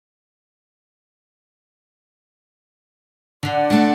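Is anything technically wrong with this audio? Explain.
No, nothing technically wrong can be heard in this audio. There are no faults to point to anywhere in the clip.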